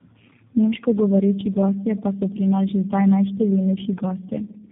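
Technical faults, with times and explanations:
Throughout, tandem speech coding: the audio sounds like it went through three low-rate speech coders in a row, which fits a chain like AMR-NB, then G.723.1, then G.729A, with plain G.711 legs between them. Each coder had to model the previous one's artefacts as if they were speech, so the errors pile up. That's why it sounds rougher, more muffled and more warbly than any single hop would, with nothing above 3.7 kHz.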